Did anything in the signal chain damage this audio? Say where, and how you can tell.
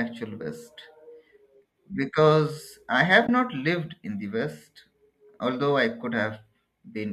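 Yes. Network-side AAC frame loss with muting leaves a soft-edged 20 ms gap at 3.27 s, between "because I have" and "not lived in the". The decoder zeroed the missing frames, so overlapping windows fade out and back in.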